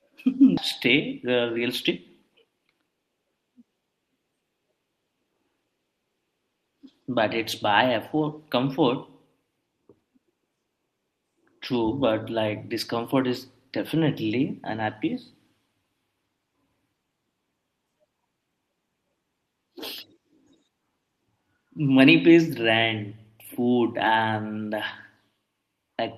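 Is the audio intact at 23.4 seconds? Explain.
Yes, the audio is intact at 23.4 seconds, with no dropout, click, distortion or other fault in the speech at that moment.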